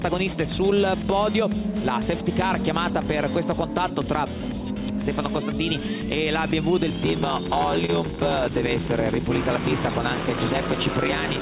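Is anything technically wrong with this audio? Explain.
Yes, there are two faults.

From 6.89 s to the end there is a padded block size mismatch: each block is written short and zero-filled, which fits 512-sample reads. This gives an 86.1 Hz buzz and playback at 0.861 speed with timbre unchanged, unlike resampling errors, which shift pitch.

At 7.86 s comes a short concealed packet loss: 20 ms never arrived and was filled by extending the preceding sound. It is heard as a brief smear, not the silent dropout of unconcealed loss.

Through the call path, nothing is present above 4 kHz.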